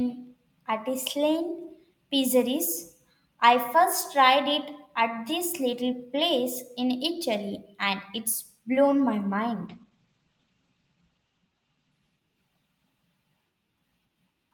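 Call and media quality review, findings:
Call bitrate drop, 9.69 s to end of clip, right after "blown my". Speech turns rough and watery, highs cut off above 8 kHz (previously full band to 20 kHz). Probable component: sender-side bandwidth estimation driving the Opus encoder. Sound fits a rate cut from about 48 to 10 kbps, floor held roughly 1.2 s. Coarser coding plus narrowed audio bandwidth. No recovery before the clip ends.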